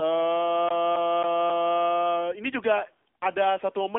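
From start to finish the speech carries AMR narrowband mobile codec damage. The band is confined to a telephone line, roughly 300 Hz to 3.6 kHz, and nothing passes above 3.8 kHz, so sibilants lose their edge. The codec models the vocal tract and drives it with sparse pulses in short subframes. At this low mode, which fits a rate near 7.95 kbps, that model is plainly audible as a buzzy, synthetic voice quality.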